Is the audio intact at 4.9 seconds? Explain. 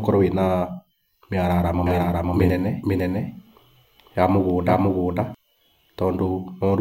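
No. At 4.9 seconds a doubled audio track is present, running from 1.87 to 5.35 s. A second copy of the speech trails about half a second behind, at roughly equal loudness. It is a clean, dry echo that stops abruptly. It likely comes from a slower capture path.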